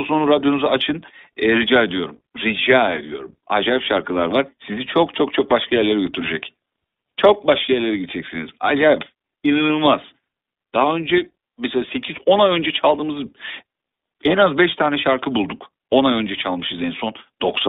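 iLBC codec damage runs through the whole speech recording. The line band spans roughly 250 Hz to 3.7 kHz, so everything above it is gone and the low end is thin. Each 20 ms frame's excitation is coded on its own, without carrying detail over from the previous frame, which fits the 15.2 kbps mode. The speech stays intelligible but has a plainly audible rough, buzzy, slightly synthetic grain.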